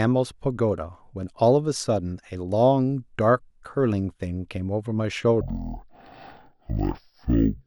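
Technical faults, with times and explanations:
5.41 to 7.66 s, stereo read as mono: from 5.41 s the speech slows to half speed and drops a full octave, with a faint mirror image in the upper spectrum. Interleaved left and right samples are being played one after another as a single channel.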